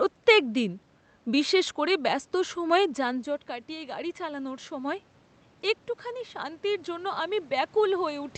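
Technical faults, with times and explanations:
2.37–5.0 s, automatic gain rising: after "বিশেষ করে ব্যস্ত" the level falls by about 13 dB, then gain climbs about 4 dB slowly, lifting voice and room noise together, unlike a talker approaching.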